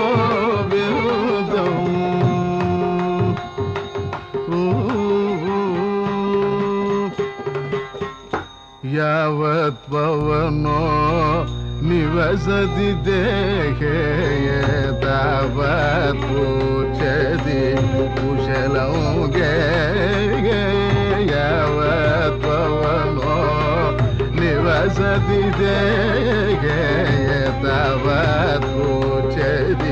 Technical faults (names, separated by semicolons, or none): mains hum